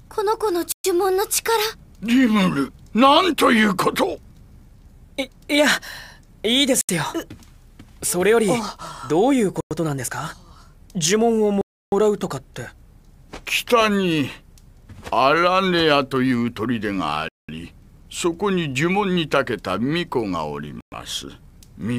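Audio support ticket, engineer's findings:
Six hard dropouts to silence, playback resuming afterwards: 0.72–0.84 s (122 ms), 6.81–6.89 s (77 ms), 9.61–9.71 s (104 ms), 11.61–11.92 s (309 ms), 17.29–17.49 s (200 ms), 20.81–20.92 s (114 ms). Waveform flatlines to silence; spectrogram shows clean full-band vertical gaps. Likely Bluetooth stall: radio interference delaying packets, headset buffer underrunning, output pausing until retransmissions land.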